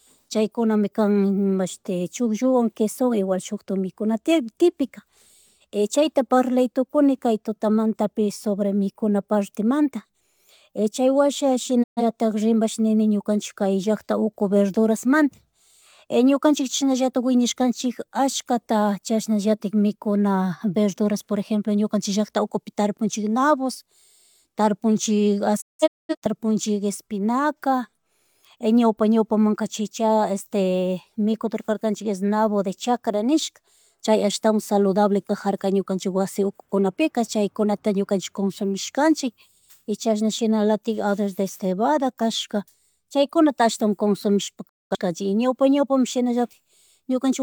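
At 11.82 s the speech drops out for about 0.2 s, a digital broadcast dropout where the receiver muted after losing a short burst of frames. At 25.60 s it breaks into scattered holes through 26.27 s, the longest around 213 ms. At 44.67 s a further gap runs to 44.96 s. Each mute fades over 20 ms. The spectrogram shows full-band blank columns and the waveform collapses to flat silence.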